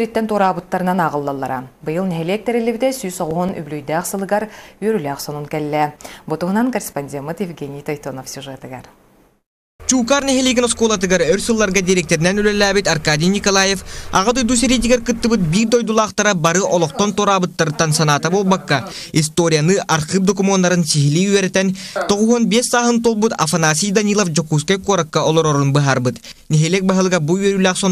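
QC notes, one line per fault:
3.13–4.19 s: CD scratch ticks. Seven regular ticks, the longest a few milliseconds, about six per second, fit one blemish meeting the laser every disc turn and defeating error correction, so the player mutes or interpolates. On a spectrogram these are evenly spaced thin broadband streaks, and on the waveform short flattened notches.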